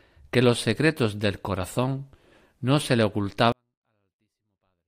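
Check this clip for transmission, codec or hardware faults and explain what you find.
One fault is present, a 24-bit alignment error that makes the speech too quiet. From 3.52 s to the end at 4.87 s, 24-bit samples packed into the low bytes of 32-bit words are read as full 32-bit integers, so the speech stays clean but abruptly drops by about 48 dB and becomes nearly inaudible.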